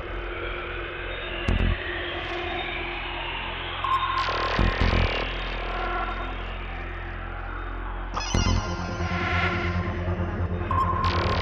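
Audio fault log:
Nothing to log here, as no fault turns up anywhere in this audio.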